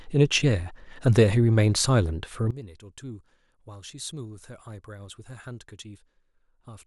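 From 2.51 s to the end at 6.87 s, the speech collapses by about 19 dB into a faint remnant, with the voice and background almost gone. The likely cause is one channel inverted: with one stereo side's polarity reversed, the shared centre content cancels when the channels sum to mono, leaving only their small differences. Unlike a plain gain drop or dropout, what survives is only a faint copy of the channels' mismatch rather than the whole signal turned down or silenced.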